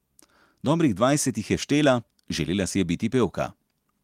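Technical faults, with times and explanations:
Nothing technical jumps out in this bit of speech; it all holds together without a hitch.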